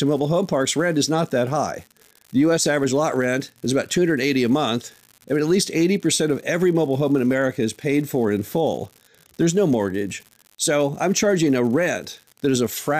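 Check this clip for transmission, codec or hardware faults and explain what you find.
There is one hardware fault, an unreliable data bit, present throughout the speech. One marginal data line flips its bit in a random share of samples. Each flip adds a same-sized step of about -28 dBFS, heard as a steady fizzy crackle that persists through pauses. A waveform shows uniform-height spikes, and a spectrogram shows broadband speckle over silence.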